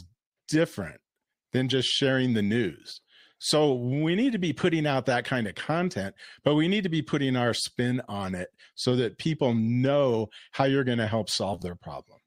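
Speech, with one case of frames out of order right after "how you're going to": from 11.53 to 11.64 s two adjacent 40 ms blocks play swapped, giving a garbled flutter, which fits two runs of about four frames decoded in the wrong order.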